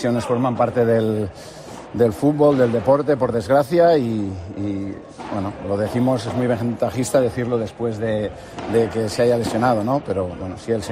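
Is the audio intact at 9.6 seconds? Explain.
Yes, the audio is intact at 9.6 seconds, with no dropout, click, distortion or other fault audible at that moment.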